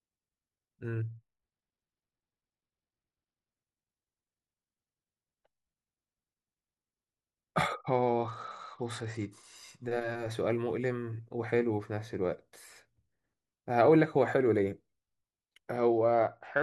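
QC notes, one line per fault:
1.09–3.51 s, 7.78–9.56 s and 15.76 s to the end: Bluetooth SBC bit pool drop. The treble goes dull and gritty noise creeps in, which fits the link falling from a bit pool of 31 to 11, around 83 kbps, starving the top sub-bands and coarsely quantising the rest until it recovers.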